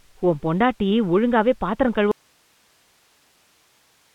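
An audio dropout to a faint residue begins at 2.12 s and lasts to the end. The speech cuts off abruptly, leaving only hiss roughly 40 dB down in the telephone-band signal, which stops at 3.8 kHz. The likely cause is the wanted signal being lost while the path stayed live.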